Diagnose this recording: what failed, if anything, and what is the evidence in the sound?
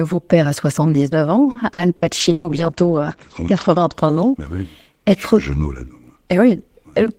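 Repeated packet loss (robotic sound), a network-stage fault, runs from 1.51 to 2.47 s: four holes, the longest 120 ms, patched by stretching the previous sound. The choppy breaks set it apart from a steady muffling.

A call bitrate drop from 32 to 11 kbps, in the codec stage, lasts from 2.24 to 4.00 s. Bandwidth narrows from 20 kHz to 8 kHz, so the speech turns muffled and watery.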